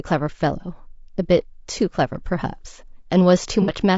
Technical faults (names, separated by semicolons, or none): low-delay AAC compression; AAC frame loss with concealment